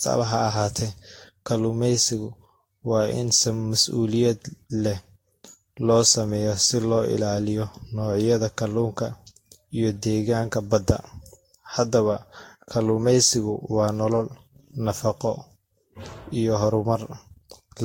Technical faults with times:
0.00-17.84 generation loss

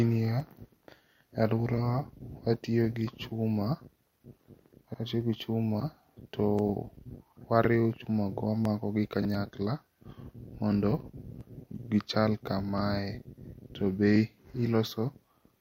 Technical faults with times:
0.40-15.54 clock drift buffer slips

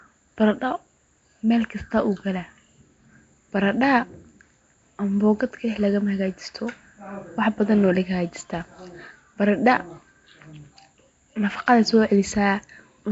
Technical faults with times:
0.00-13.11 Nellymoser compression

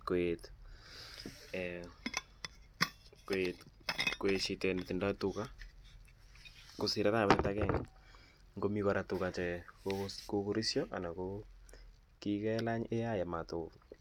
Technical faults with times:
none

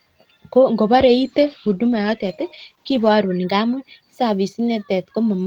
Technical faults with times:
0.90-3.19 call bitrate drop

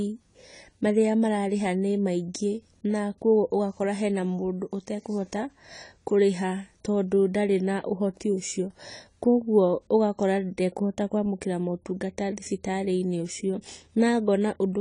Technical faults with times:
0.00-14.80 AAC compression

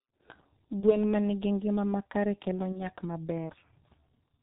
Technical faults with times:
0.00-4.42 G.723.1 codec
0.80-0.95 VoIP packet loss concealed by the speech codec
2.72-2.81 VoIP packet loss concealed by the speech codec

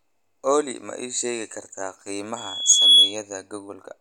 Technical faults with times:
2.36-3.16 loudspeaker feedback squeal

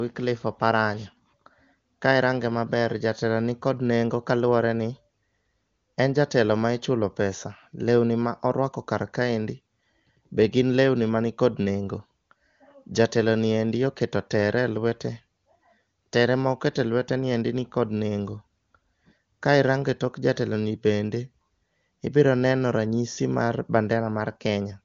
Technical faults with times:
none

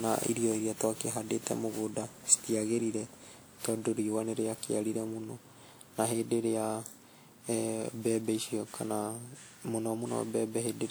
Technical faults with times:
0.00-10.91 generation loss

